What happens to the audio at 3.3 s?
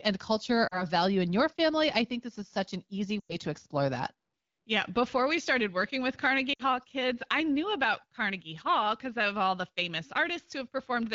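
Between 3.20 and 3.36 s, just after "is such an easy", lost AMR speech frames drop out about 100 ms of speech. The wideband decoder repeats the last good pitch and vocal-tract settings with falling gain, so the sound drops to near silence within two frames, then returns briefly weak at "to explore that".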